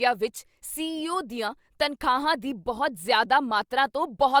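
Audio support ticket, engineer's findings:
Regular clicks in speech every 1.1 s, about 0.38 to 3.69 s; likely clock drift buffer slips, independent device clocks off by roughly 150 ppm, dropping or repeating a few samples.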